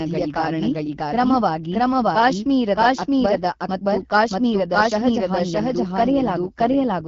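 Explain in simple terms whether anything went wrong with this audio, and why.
Two things went wrong, and both last the whole clip.

First, there's a doubled audio track. The speech plays twice: a second copy trails the first by roughly 0.7 seconds and is about as loud as the original. It sounds like an overlapping echo, but it's clean, with no fade or room sound to it. The likely cause is the same speech getting captured again through a slower route, or an edit that left two misaligned copies stacked together.

Second, the speech has gone through the AMR wideband (HD Voice) codec, the format used for HD phone calls, at one of its lower quality settings. That's why the speech sounds rough and a bit raspy, with clearly audible damage from start to finish. There's also nothing above roughly 7.4 kHz, so the crisp top end is missing and everything sounds phone-like and slightly dull.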